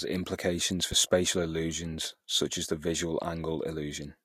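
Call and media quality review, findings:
Loud pop, 0.92–0.95 s, between "implications for" and "spatial illusions such as". Single sharp transient peaking roughly 5 dB above the speech, which continues underneath. Likely a voltage step from a plug, switch or static discharge, shaped by downstream circuitry.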